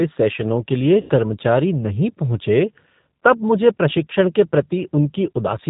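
From the start, the speech carries the G.729 codec's plainly audible damage. The codec (the sound fits G.729A at 8 kbit/s) rebuilds each 10 ms frame from a vocal tract filter, a pitch predictor and a few pulses, so nothing above 4 kHz survives and the result sounds rough and slightly synthetic.

Between 1.0 and 1.37 s comes VoIP packet loss concealed by the speech codec. About 90 ms of audio is missing, which fits three lost packets. The decoder fills the gap by extending its last pitch and filter state at falling gain, producing a stretched, buzzy tone or coloured noise that fades. Because each frame depends on the previous one, the speech stays weak or distorted for a short time after the packets return.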